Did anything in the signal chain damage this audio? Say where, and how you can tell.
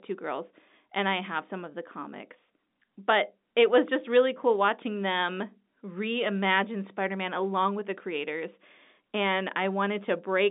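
No, nothing in the chain has hurt this speech; the band stopping around 3.8 kHz and the 200 Hz to 3.7 kHz line response are simply what ordinary 64 kbps G.711 A-law telephone coding sounds like.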